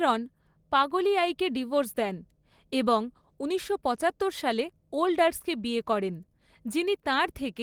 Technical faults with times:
none

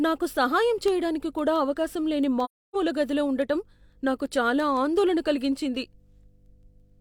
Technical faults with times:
0.00-7.01 mains hum
0.21-6.97 word clock ticks
2.44-2.75 AAC frame loss with muting

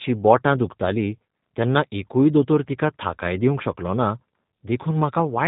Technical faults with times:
0.00-5.48 G.729 codec

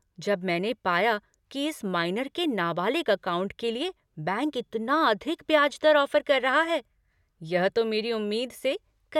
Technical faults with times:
none

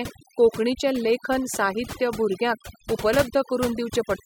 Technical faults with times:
0.00-4.25 overdone noise removal

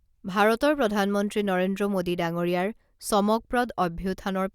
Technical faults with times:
none

